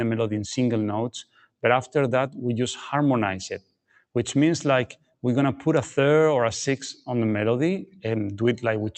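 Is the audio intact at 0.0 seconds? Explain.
No. From the very start at 0.0 s, and across the whole clip, the sound pumps and thins: sustained parts and decaying tails dip by about 5 dB while sharp onsets pass through. This is a noise suppressor applied to music or sounds. A speech-tuned suppressor treats steady tones and ambience as background noise and pulls them down between attacks. Over the call path, the top end stops near 8 kHz.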